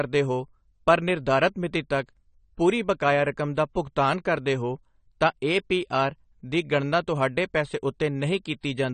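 Throughout the speech, the audio was likely squeezed through AAC compression at too low a bitrate, which fits 32 kbps AAC-LC. Nothing survives above 9 kHz, and the remaining bands are coarsely coded, so the speech sounds dull and smeared, with fizzy, warbling sibilants.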